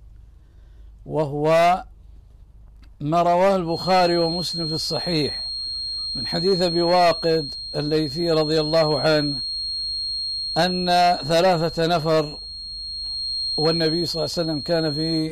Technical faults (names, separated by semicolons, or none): feedback whistle